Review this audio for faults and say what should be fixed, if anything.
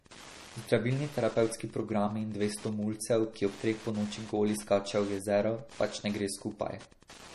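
Wi-Fi interference runs through the whole speech clip as a steady tick every 102.4 ms, about ten per second, sitting roughly 20 dB below the speech. A nearby Wi-Fi radio's beacon pulses are picked up and rectified by the audio circuit. Move the router or phone away from the recording chain and use shielded, grounded cabling.

MP3 compression is the likely cause of the watery, swirling texture on the speech throughout, with sibilants turning metallic and nothing above 13.4 kHz. The encoder drops weak frequency lines frame by frame and cuts the treble, which points to a low bitrate around 40 kbps. Record and deliver at a higher bitrate or in a lossless format.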